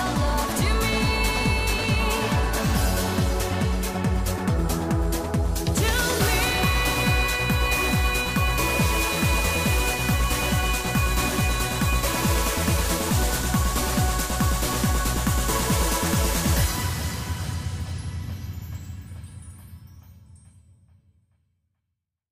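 Nothing technically wrong turns up anywhere in this audio, so there are no times or causes to point to.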